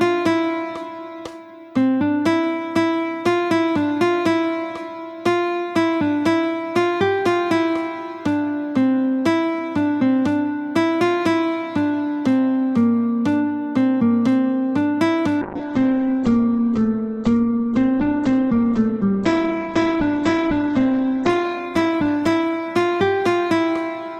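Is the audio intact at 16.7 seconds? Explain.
No. At 16.7 s the audio is inside a call bitrate drop that begins at 15.43 s and runs to the end of the clip. The call's bandwidth estimate collapsed, so the encoder was pushed from 128 kbps down to 9 kbps, holding its lowest rate for about 5.6 s, and its coded bandwidth shrank from 20 kHz to 8 kHz. The sound there is coarse and watery, with the top end gone and a dull, muffled character.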